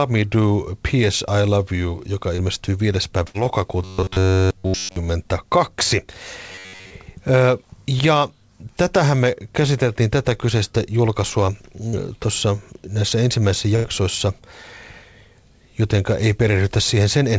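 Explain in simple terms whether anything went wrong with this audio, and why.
Several call glitches interrupt this speech, heard through a call codec that carries nothing above 8 kHz, so it sounds a little dull.

Short concealed packet loss happens twice: at 2.36–2.41 s, and at 11.89–11.96 s, just after "käsiteltiin tätä kyseistä julkaisua" and before "tuossa näissä ensimmäisissä". A few hundredths of a second of audio arrived too late, and the receiver papered over the hole by stretching the sound just before it. You hear a quick smear or wobble, and almost nothing is lost.

A burst of packet loss is a longer version of the same problem, at 3.28–3.37 s and at 13.76–13.87 s, the second right after "tuossa näissä ensimmäisissä". Here about 60 ms and then about 90 ms went missing. The filler can't keep up, so the sound turns into a fading buzz or hiss, and then the speech jumps ahead with part of it gone. 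That missing stretch is what sets it apart from the tiny smears.

Robotic sound from repeated short buffers covers 3.83–4.97 s and 6.52–6.90 s. The speech turns metallic, with a fixed 94 Hz buzz under it. The likely cause is fresh audio arriving too seldom, so the software kept replaying a tiny slice, which fits a chunk of roughly 10.6 ms, for most of that time. Unlike the dropouts, nothing goes silent. The speech keeps moving but sounds machine-like for up to about a second.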